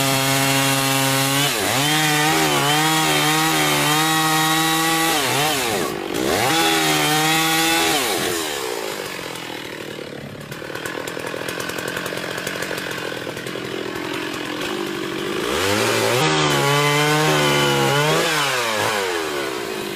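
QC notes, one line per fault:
6.46 to 6.51 s and 16.16 to 16.21 s, compressed frames skipped: the audio jumps ahead by about a tenth of a second, then about a fifth. That fits two and then four 46.4 ms frames never being decoded.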